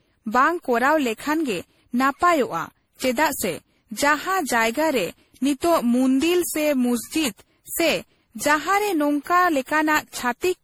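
Speech throughout shows generation loss, likely from being decoded and re-encoded as MP3 around fifteen times at a rate that fits 64 kbit/s, each pass requantising on a shifted frame grid, so the voice sounds swirly, smeared and hollow and consonant attacks blur.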